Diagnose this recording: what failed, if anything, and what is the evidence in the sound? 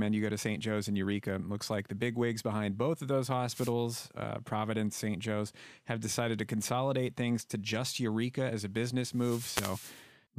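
Wireless microphone noise hit at 3.50–3.73 s, after "behind both of those", and again at 9.07–10.11 s, after "as a". Failure sits in the analogue FM radio link ahead of conversion: reflections cancel the carrier, so receiver noise swells into a static burst over the speech.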